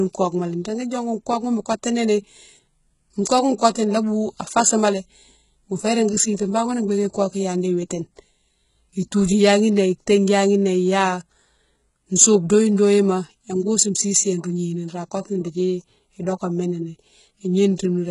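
Throughout the speech, s sounds turn gritty and metallic below a hard ceiling at 11.1 kHz, likely HE-AAC compression rebuilding treble from copied lower bands at a very low bitrate.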